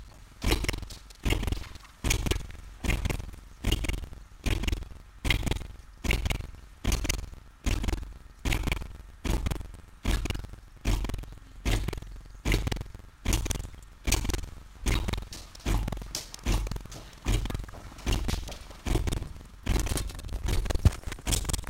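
From start to finish there's buffer tearing: a rattly buzz at 21.5 Hz, which fits a 2048-sample buffer, where roughly a third of each block repeats audio from about a fifth of a second earlier. Sample clock jitter also runs throughout. A wobbly converter clock, off by something like 7 microseconds, leaves a rough hiss about 20 dB under the signal that swells on loud, bright passages.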